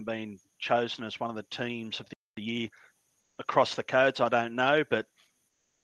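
At 2.13 s the sound cuts out for about 240 ms, to 2.37 s. This is a playback stall, likely the player running dry of buffered data. On a waveform it shows as a flat gap, and on a spectrogram as a blank vertical band.

From 2.37 to 2.83 s comes time-compressed catch-up. The player clears its backlog by dropping small slices and cross-fading the joins, so the audio runs about 1.5 times fast at unchanged pitch. A spectrogram shows harmonics staying level while events crowd closer together.

At 3.20 to 3.38 s, for 180 ms, the background is replaced by comfort noise, likely from Opus discontinuous transmission. A smooth, featureless hiss about 7 dB quieter stands in for the real background. On a spectrogram the textured noise floor turns uniform and dims. The same happens from 5.48 s to the end, 356 ms, about 5 dB down. Both stretches stay within the Opus call band, which tops out near 12 kHz.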